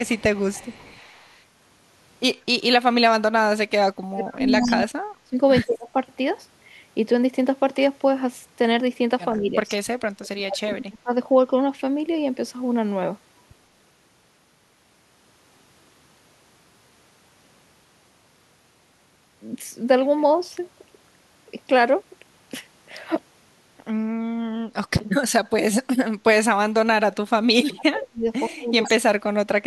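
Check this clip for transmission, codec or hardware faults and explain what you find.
Two faults linked to echo cancellation run through this speech clip: an echo leak and speech suppressed in double talk.

Echo leak appears from 0.05 to 1.43 s, 4.51 to 4.75 s, 9.33 to 9.75 s and 28.84 to 28.89 s. This is likely a far-end loudspeaker whose echo canceller failed to remove all of the sound its microphone picked up, so the remainder was sent back. It is heard as a faint delayed copy of the speech trailing by 115 ms, roughly 25 dB below the speech at first and nearer 15 to 20 dB below in the later bursts.

Speech suppressed in double talk occurs from 2.61 to 5.95 s, 9.34 to 9.56 s, 10.16 to 11.13 s, and from 26.52 s to the end. When both ends talked at once, the echo canceller likely could not separate the local talker from the loudspeaker echo and attenuated both. The speech dips and breaks up in pieces. 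The drops reach around 40 dB in the first and last stretches, around 35 dB at 10.16 s, and only about 10 dB in the brief dip at 9.34 s.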